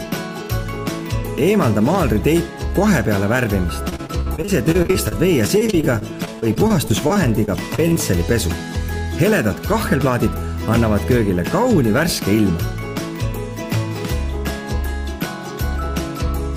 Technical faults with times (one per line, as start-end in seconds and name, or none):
3.89-7.97 repeated packet loss (robotic sound)